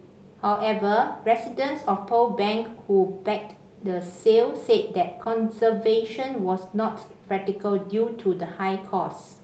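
At 0.53–0.57 s and again at 5.23–5.27 s, short concealed packet loss interrupts the speech. About 20 ms of audio failed to arrive in time each time, and the decoder bridged the gap by extending the preceding sound before fading back into real signal, heard as a brief smear or wobble. On a spectrogram, each spot shows harmonics or noise stretched flat for a moment, with no energy above about 8 kHz.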